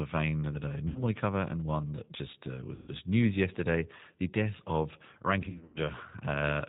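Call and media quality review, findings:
G.729 codec, whole clip: band-limited, slightly rough, synthetic speech; consistent with an 8 kbit/s G.729A link. Spectrogram: hard ceiling at 4 kHz, smeared harmonics. Cause: decoder rebuilds speech from a vocal tract filter, pitch predictor and sparse pulses.

VoIP packet loss concealed by the speech codec, 0.88–1.03 s, after "vein that I", before "cover and one that": 70 ms gap filled with stretched, decaying sound. Waveform shows a falling envelope.

2.75–2.92 s, after "one that just uh", before "news yesterday the death": 130 ms concealed. Stretched sound fades out.

5.42–5.80 s, after "yesterday the death of": 210 ms lost, scattered over 340 ms, longest run 90 ms. Intermittent concealment, weak recovery. Decoder extrapolates last pitch and filter, ramping gain down frame by frame.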